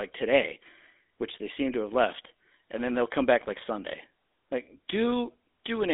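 From start to finish the speech has passed through the GSM full-rate codec, which rebuilds the voice from a vocal-tract model driven by a sparse, regularly spaced pulse excitation. The rate this implies fits the old 13 kbps mobile channel. The result is a buzzy, gravelly roughness that is plainly audible, squeezed into a narrow line band of about 250 Hz to 3.6 kHz, with nothing at all above 3.8 kHz.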